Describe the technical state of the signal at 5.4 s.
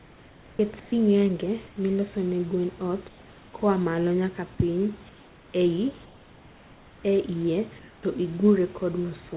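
5.4 s falls in comfort noise in place of the background (5.09–5.54 s): flat, featureless hiss about 3 dB down, likely synthesised while transmission paused.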